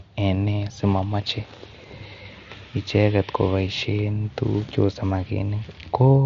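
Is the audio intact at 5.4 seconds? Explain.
Yes, the audio is intact at 5.4 seconds, with the speech passing cleanly through the Bluetooth mSBC headset codec, whose band limit leaves nothing above about 7.6 kHz.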